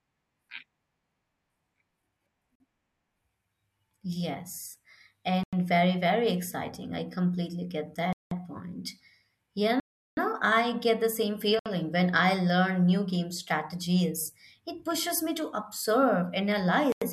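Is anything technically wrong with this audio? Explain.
Yes. The speech drops abruptly into dead silence six times. These are blocks of digital silence at 2.55 s (47 ms), 5.43 s (93 ms, just before "very very exciting"), 8.13 s (186 ms), 9.80 s (372 ms), 11.59 s (64 ms) and 16.92 s (93 ms). The shortest sound like short holes and the longest like longer holes. Runs of samples were replaced by zeros with no fade, and the lengths doubling from 93 to 372 ms point to output buffers of 4096 samples or multiples of that not being filled in time.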